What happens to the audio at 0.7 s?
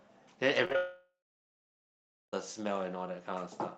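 Around 0.7 s you're hearing repeated packet loss, the robotic kind, running from about 0.65 to 0.75 s. Four short holes land in that tenth of a second, the longest about 16 ms. Each hole gets papered over by stretching the last bit of sound, so roughly half that span is patched rather than real. That's what gives it the choppy, machine-like texture, with little pieces audibly missing.

Right after, from 0.76 to 2.33 s, the sound stops. There's a brief buzzy continuation of the last sound that fades out, then about 1.2 s of near silence before the audio picks up again further along, with that whole 1.57 s stretch simply gone. That's most likely a long network dropout, where nothing arrived for over a second and the receiver could only fill the gap briefly before giving up.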